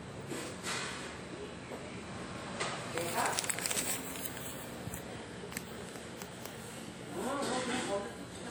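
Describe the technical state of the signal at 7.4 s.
At 7.4 s the sound rings and washes, with a hiss that breathes along with it; this runs through the whole clip. The likely cause is WMA compression at a bitrate near 48 kbps: long transform blocks smear quantisation noise across tens of milliseconds. Content reaches about 20.1 kHz, so the damage is this smeared, pumping noise rather than a missing top octave.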